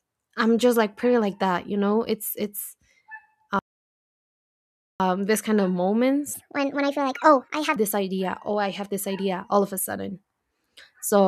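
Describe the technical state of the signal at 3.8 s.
A playback stall runs from 3.59 to 5.00 s: the speech cuts to silence for about 1.4 s, likely because the player starved of data, then resumes at "this kind of".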